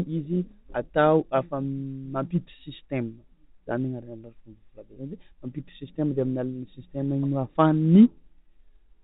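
At 4.94 to 4.96 s, packet loss with pitch repetition: one 20 ms gap is bridged by repeating the last pitch period, giving a brief buzzy hold rather than a silent dropout.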